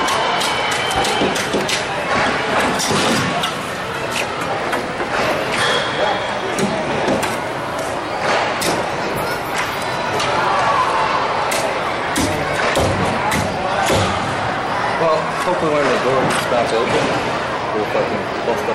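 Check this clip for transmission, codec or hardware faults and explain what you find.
There is one fault: hard clipping, present throughout the clip. The signal reaches the stage ahead of the output about 7 dB hotter than that stage can pass, so every peak above the ceiling is sliced flat. Only a small share of samples, around 2 percent, exceed the limit, but each flattened top adds high-order harmonics. The result is a gritty crackle on louder moments.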